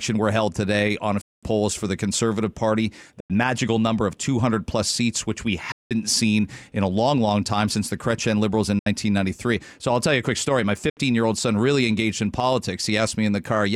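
The speech cuts out five times: 1.21 to 1.43 s (about 209 ms), 3.20 to 3.30 s (93 ms), 5.72 to 5.91 s (186 ms), 8.79 to 8.87 s (70 ms), and 10.89 to 10.97 s (70 ms). Each gap drops to silence, and the talking picks up further along rather than where it left off, as if it had kept playing underneath. That pattern is likely a Bluetooth dropout, where packets miss their deadline to the headphones and get discarded.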